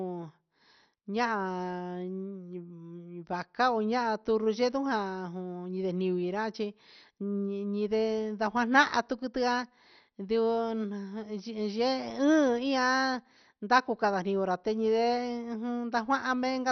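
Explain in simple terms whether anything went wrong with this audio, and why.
Throughout the speech, the sound is dull, with nothing above about 6.1 kHz, and it has a gurgling, grainy roughness. That is likely MP2 compression squeezed too hard: upper frequency bands flicker on and off. A simple treble cut would sound muffled but smooth.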